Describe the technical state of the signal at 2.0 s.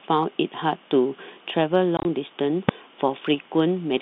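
Around 2.0 s the speech breaks into rapid holes of dead silence with hard edges, between 1.97 and 2.05 s. About 60 ms of that 80 ms stretch is missing, in short gaps no longer than 20 ms each. This is packet loss filled with silence: packets never arrived and the receiver played nothing in their place. The gap sizes fit 10 ms packets. The surrounding sound keeps the narrow 150 Hz to 3.7 kHz telephone band of G.711 coding.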